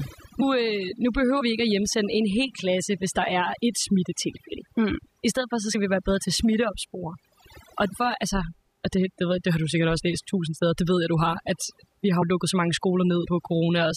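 Throughout, the speech sits over a near-silent background flecked with twinkling specks: overdone noise removal, which pulled noise-adjacent frequency bands, and quiet speech detail, down hard.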